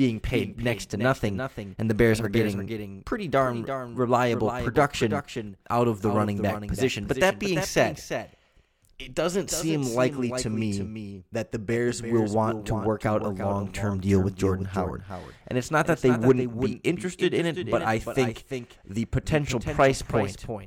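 A doubled audio track runs throughout the speech: a second, full-band copy trails the original by roughly 300 ms at about 10 dB lower, dry and without decay. It was likely captured again through a slower path or left out of step by an edit.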